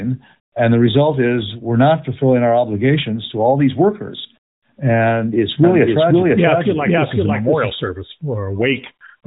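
From 5.64 s to 7.70 s a second copy of the speech runs alongside the first, trailing it by roughly half a second at about the same loudness, so every syllable returns as a clear, dry repeat with no room tail. It appears and vanishes abruptly at those edges. This is a doubled audio track, likely from the signal being captured twice, once through a slower path. Both copies carry the same narrowband, lightly coded mobile-call character.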